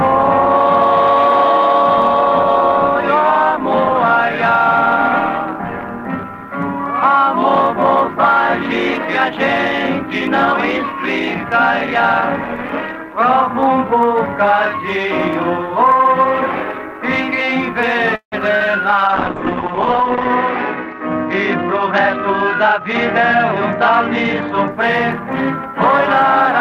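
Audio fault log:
18.15 to 18.34 s, call audio freeze: the sound stalls, with the last sound carried on as a fading buzz and then about 100 ms of silence, 165 ms in all. Playback then picks up exactly where it stopped, so nothing is lost but a gap is inserted and the delay grows by 165 ms. The likely cause is packets held up in transit, leaving the jitter buffer empty until they arrived.
18.58 to 18.62 s, short concealed packet loss: roughly 20 ms of audio failed to reach the decoder in time, and the receiver bridged the hole by extending the preceding sound before blending back into the real signal. The result is a brief smear or wobble rather than a clean dropout. Any short transient that fell inside that window is replaced by the synthesised fill.
19.08 to 24.77 s, call bitrate drop: the encoder rate falls from 32 kbps to 8 kbps, spending about 1.24 s at the lowest rate. With so few bits Opus quantises coarsely and narrows the coded band from 20 kHz to 8 kHz, so the sound turns muffled, with a rough, watery texture, until the rate climbs back and the top end returns.
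21.84 to 24.00 s and 24.71 to 26.26 s, jitter buffer speed-up: in both stretches the buffer was holding more audio than its target, so the receiver trimmed short pitch-period slices repeatedly, playing at about 102% speed with pitch unchanged. Around 50 ms is removed in the first run and around 40 ms in the second, a speed-up too small to sound hurried rather than an audible jump.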